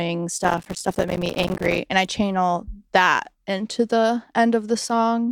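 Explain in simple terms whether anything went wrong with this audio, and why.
Gritty crackle runs from 0.42 to 1.78 s, ending before "and i channel that". This is processor overload crackle: the computer kept missing tiny audio deadlines, leaving brief silent gaps.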